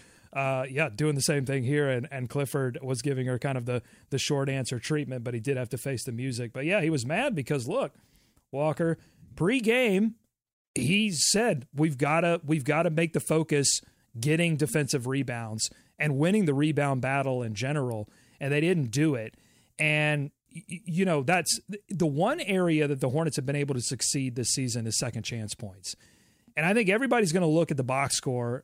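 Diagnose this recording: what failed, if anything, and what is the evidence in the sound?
Nothing failed in this recording: there is no fault to hear anywhere in the speech.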